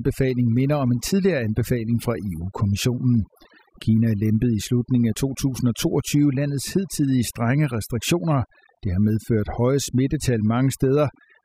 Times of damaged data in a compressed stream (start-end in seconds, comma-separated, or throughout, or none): none